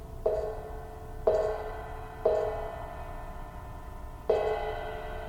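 No technical faults can be heard anywhere here.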